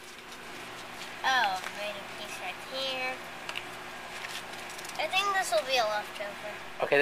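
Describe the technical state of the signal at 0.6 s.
Around 0.6 s the signal is intact, with no dropout, distortion, noise or other technical fault audible at that moment.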